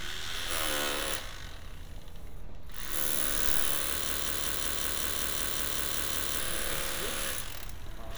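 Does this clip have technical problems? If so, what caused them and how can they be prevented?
Yes. A broken-record loop runs from 4.10 to 6.40 s: a 0.19 s fragment repeats 12 times back to back, likely from a stalled player or stream resending its last buffer. Prevent it with stall detection that mutes or resyncs instead of repeating.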